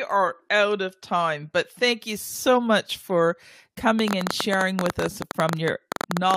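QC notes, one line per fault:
3.99–6.35 s: train of clicks. About 30 sharp, similar ticks arrive at roughly 12.8 per second, unevenly spaced, peaking around 15 dB above the speech. They sit on top of speech and pauses alike. Likely interference or a faulty connection or power supply injecting repeated pulses.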